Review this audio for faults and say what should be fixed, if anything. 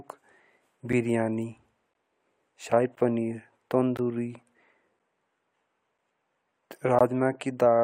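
Gaps between stream segments cut the speech at 0.93, 1.94, 2.95, 3.97, 4.99 and 6.99 s. Each is a hard-edged silence of 7 to 18 ms, recurring about once per second. Mismatched segment timestamps leave small holes that the player fills with silence. Align each segment's start time exactly with the previous segment's end.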